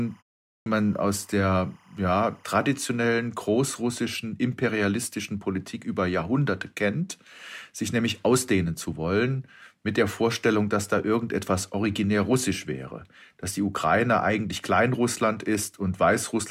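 From 0.0 to 3.28 s, ending just before "großrussischen imperialistischen", timecode bleed adds a chirping warble: 25 frames-per-second code switching between roughly 1 and 2 kHz, around 35 dB below the speech.

At 0.55 s, after a 0.41 s pause, a clipped start after a pause swallows about 111 ms as the output device wakes, so speech begins abruptly, missing its onset.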